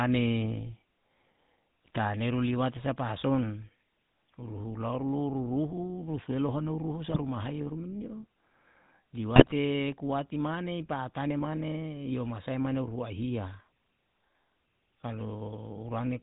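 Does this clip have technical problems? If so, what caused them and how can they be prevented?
Yes. The GSM full-rate codec colours the whole clip with a buzzy, gravelly roughness, which fits 13 kbps full-rate coding. The decoder rebuilds speech from a vocal-tract filter fed by sparse regular pulses, so nothing above 4 kHz survives. A spectrogram shows a hard ceiling at 4 kHz and coarse, grainy harmonics. A wideband codec such as AMR-WB or Opus would prevent this.

GSM bit errors break the speech into brief squawking, gargling bursts at 1.85–1.99 s, 7.08–7.23 s and 9.36–9.52 s. Corrupted filter, pitch and gain values distort the spectrum and jolt the level frame by frame. The waveform shows sudden amplitude jumps, and the spectrogram shows smeared, misplaced energy blocks. A stronger radio link and better error protection would prevent them.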